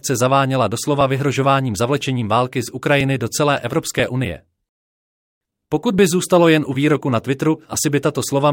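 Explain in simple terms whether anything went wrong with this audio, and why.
Something did go wrong. From 1.01 s to 5.99 s there are periodic USB or driver dropouts. About once per second, the connection stalls and a few milliseconds of sound get skipped. This happens roughly seven times, evenly spaced, and each gap is heard as a tick while sound is playing.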